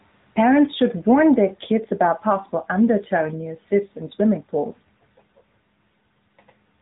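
A speech clip that's been through the AMR narrowband mobile codec for its whole length, and you can hear it plainly. Nothing makes it past about 3.8 kHz, so the voice sounds boxed-in and phone-like, since the codec works at an 8 kHz sample rate. On top of that there's a buzzy, synthetic edge from rebuilding the voice out of a vocal-tract model and a handful of pulses every 5 ms. The amount of damage fits one of AMR-NB's middle modes, around 10 kbps.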